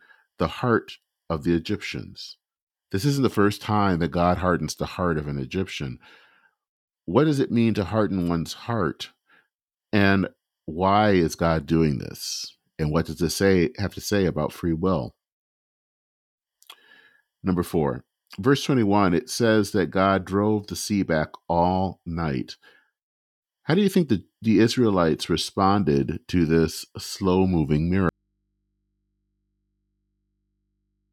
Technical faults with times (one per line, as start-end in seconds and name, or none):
28.09-31.12 audio dropout to a faint residue